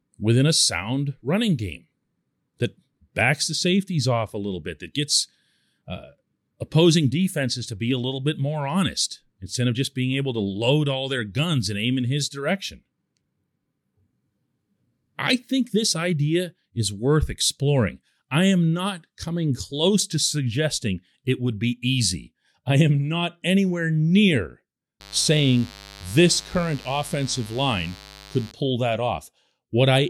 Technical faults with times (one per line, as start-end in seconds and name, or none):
25.00-28.52 mains buzz